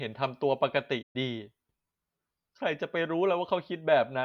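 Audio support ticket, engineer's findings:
Playback stall, 1.02 s to 1.16 s: speech cuts to silence mid-flow for about 120 ms, then resumes. Likely player-side starvation, with the output buffer running dry or the audio thread blocked, so nothing reaches the device until data flow recovers.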